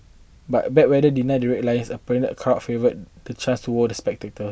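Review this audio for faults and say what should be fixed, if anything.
No faults turn up in this audio, so nothing needs to be fixed.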